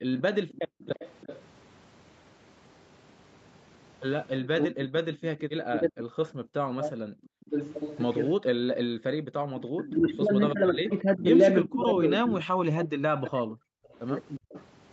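Right from the start, 0.0 to 0.8 s, the background is gated by the echo canceller. While the far end was playing through the loudspeaker, the canceller clamped the microphone down by about 40 dB, so the room tone keeps dropping out. It adds up to roughly a third of a second of holes before the canceller releases and the ambience comes back.

Overlapping that, from 0.17 to 1.41 s, there's an echo leak: a faint copy of the sound trailing about 347 ms behind, sitting well down at roughly 20 dB under the main level. It's likely the loudspeaker side's canceller not fully removing what its mic picked up and sending the leftover back.

From 4.41 to 14.49 s the speech gets suppressed in double talk. It dips in pieces, at worst by roughly 40 dB, and adds up to around four seconds of lost or weakened stretches. The likely cause is both sides talking at once, with the canceller unable to separate the near talker from the loudspeaker echo and ducking everything.

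Inside that span, 5.35 to 9.44 s, the background gating returns, again up to about 40 dB deep, totalling roughly half a second of dropouts.

Then from 6.45 to 14.64 s the echo leak comes back with a slightly longer delay of 361 ms, again at roughly 20 dB below the speech. Throughout, the audio tops out at 8 kHz, as the call path's bandwidth sets it.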